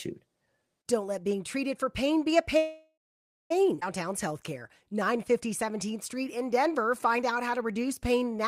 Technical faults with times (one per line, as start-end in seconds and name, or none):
2.57-3.52 call audio freeze
3.80-3.83 skip ahead
4.10-8.38 jitter buffer slow-down